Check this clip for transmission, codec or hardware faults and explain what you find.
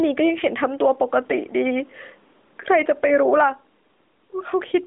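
One fault runs through the whole clip: gain pumping. The input gain is likely set far too high for the microphone, so a fast limiter or compressor clamps down each time the speech gets loud and then releases in the pauses. The level swings by around 10 dB. The speech sounds squashed, its loud and quiet parts pressed close together. The AMR-NB narrowband mobile codec at 12.2 kbps holds the sound to a 250 Hz to 3.6 kHz band, with light codec colouring.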